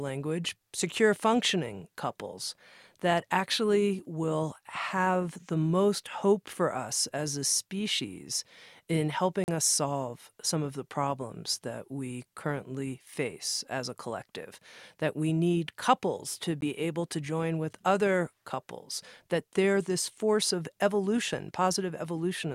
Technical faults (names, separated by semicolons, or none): Bluetooth dropout